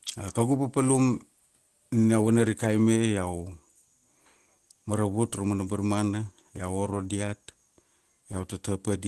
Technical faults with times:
6.91-6.93 lost packet rebuilt from error correction

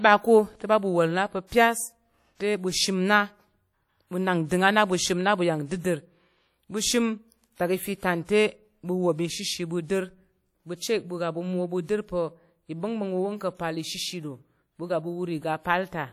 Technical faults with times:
0.00-16.13 WMA compression

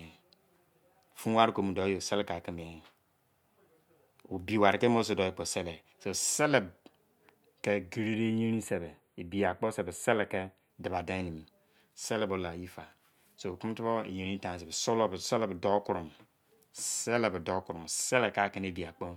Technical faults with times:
8.14-10.70 channel delay (comb filtering)

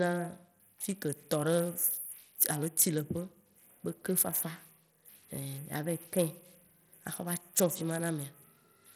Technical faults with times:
0.00-8.96 Bluetooth SBC compression

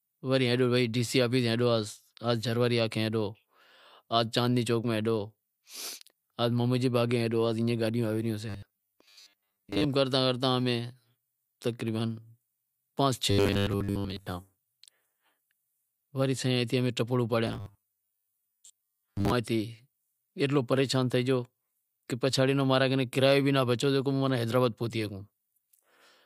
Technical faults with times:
8.49-9.84 robotic sound from repeated short buffers
13.31-14.27 robotic sound from repeated short buffers
17.47-19.32 robotic sound from repeated short buffers

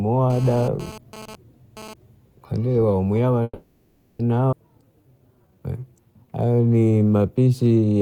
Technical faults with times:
0.30-1.94 GSM phone buzz
3.43-4.21 call audio freeze
4.51-4.54 skip ahead
4.85-7.98 jitter buffer slow-down

